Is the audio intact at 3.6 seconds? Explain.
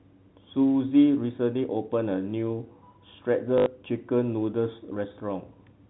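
No. From 3.58 to 3.66 s, packet loss with last packet repeated replays one 20 ms-like block, giving a robotic stutter: identical repeated waveform segments.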